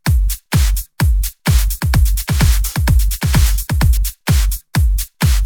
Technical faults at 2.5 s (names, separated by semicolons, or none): doubled audio track